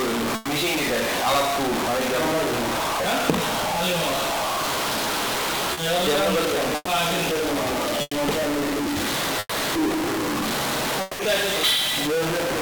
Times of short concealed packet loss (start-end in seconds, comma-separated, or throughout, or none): 5.73-5.79